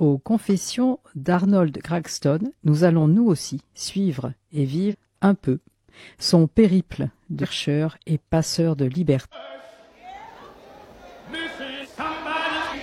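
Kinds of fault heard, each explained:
Damaged data in a compressed stream: corrupted bytes in the encoded stream made the decoder misread frames and lose sync until it found the next frame header, producing brief glitches lasting 58 to 67 ms at 4.88, 7.39 and 9.29 seconds.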